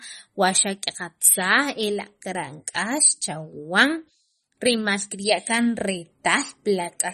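Throughout the speech, a starved encoder, likely MP3 compression at a low bitrate around 32 kbps, has removed everything above 12.5 kHz and dropped weak frequency detail frame by frame, leaving a dull top end, watery swirling, chirpy s sounds and smeared attacks.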